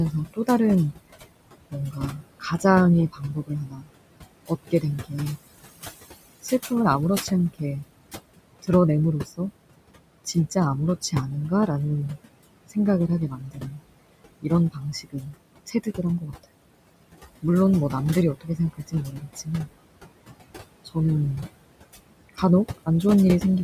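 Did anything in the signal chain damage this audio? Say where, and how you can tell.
Yes. In call processing, overdone noise removal runs throughout: the background drops and breaks up into twinkling specks, unlike a codec's steady smearing.

The noise suppressor artifacts also run throughout. The background, about 21 dB down, sinks between words and rises beneath them, a frame-by-frame gating distinct from a constant low-pass or gain change.

The suppressor also cut speech it took for noise, from 0.12 to 16.45 s (about 3 s in total), 17.42 to 19.48 s and 20.85 to 22.88 s, with quiet endings dropping by about 16 to 20 dB. This differs from network dropouts because the loud parts survive.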